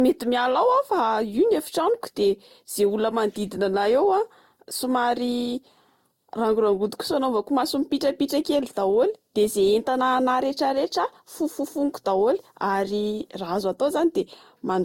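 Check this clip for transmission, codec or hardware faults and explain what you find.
One codec fault runs through the whole speech clip: transcoding between lossy codecs. Across the full length the voice carries two layers of damage at once: one codec's artefacts overlaid with a second set of artefacts, and nothing above 16.6 kHz. The likely cause is a first low-rate encode whose artefacts were then re-encoded by a different codec, which spent bits preserving those flaws while adding its own. The character fits Opus at around 24 kbit/s followed by Vorbis at around 65 kbit/s.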